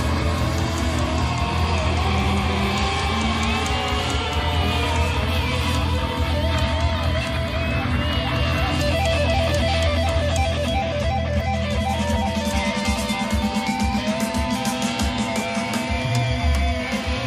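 Timecode bleed creeps in at 15.48 s and runs to the end at 17.26 s, a chirpy warble sitting roughly 20 dB under the sound. Linear timecode at 25 frames per second is leaking from a neighbouring track or cable, flipping between tones around 1 and 2 kHz.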